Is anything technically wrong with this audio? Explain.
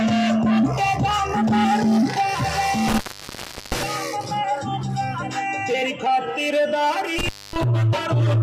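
Yes, there's an intermittent contact fault, and it hits twice. Around 2.88 to 3.83 s the signal drops out for roughly 0.73 s, then again from 7.19 to 7.63 s for about 0.24 s. That's a loose plug or cable briefly losing connection: you get a crackle as the contact breaks and again as it reseats, and while the line is open the audio is gone, leaving just faint hiss.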